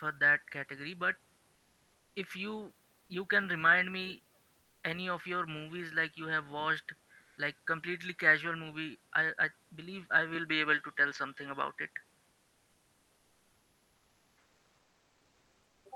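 From 7.21 to 7.37 s, between "like you have watched" and "like completely casual movie", the room's background gives way for 160 ms to a flat, even hiss with none of its usual texture, and the level shifts by about 3 dB. That background sits about 40 dB below the loudest speech. This is comfort noise in place of the background, likely from Opus discontinuous transmission: the sender paused its stream, and the receiver filled the pause with synthetic noise.

Right after "i i believe i", at 10.35 s, the speech turns duller and stays that way until 15.61 s. There is no gap at the change. Nothing is heard above 7.6 kHz, the level moves by a few decibels, and a different noise floor, roughly 50 dB under the speech, takes over. This points to the input switched to a poorer device, likely a narrower-band microphone or headset profile taking over mid-recording.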